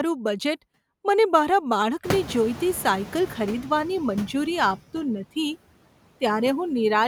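Noise suppressor artifacts run through the whole speech clip: the suppressor pulls about 18 dB out of bands it judges to be steady noise, so the background sinks between words and swells under them. On a spectrogram the noise floor looks patchy and gated.

From 2.04 s to 3.8 s the noise suppressor is catching up after the room noise jumps by about 25 dB at around 2 s. At first it removes only about 6 dB, so the noise breaks through and fades over 1.76 s, ending just before "મંજૂરી આપતું". The waveform shows a raised floor tapering down, and the spectrogram shows a band of noise fading out. Afterwards the room noise sits about 17 dB below the speech.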